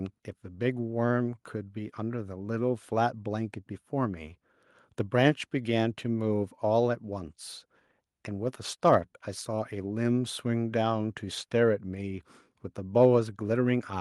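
No technical faults occur at any point in the recording.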